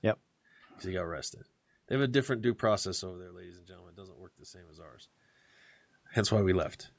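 Automatic gain rising runs from 3.01 s to 5.08 s. Around 3 s the talker moves away and the level reaching the microphone falls by about 17 dB, so the gain control treats the input as too quiet and slowly pushes its gain up by about 5 dB over roughly two seconds. The voice and the room noise behind it swell together during that stretch, an audible creeping lift rather than a sudden jump.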